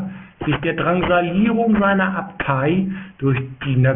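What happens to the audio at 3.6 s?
At 3.6 s the speech sounds gritty and metallic, with sibilants turned harsh and false tones sitting near the top of the band. That is aliasing, and it runs through the whole clip, not just this moment. The audio was cut to a low sample rate, which fits 6 kHz, without a filter first. Everything above the 3 kHz limit folded back down as unrelated frequencies, roughly 15 dB below the speech.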